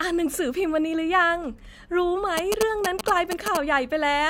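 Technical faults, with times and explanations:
2.37–3.57 s, GSM signalling bursts: a galloping dit-dit-dit of short 217 Hz buzzes at roughly speech level, as the audio circuit rectifies a nearby 2G phone's signalling.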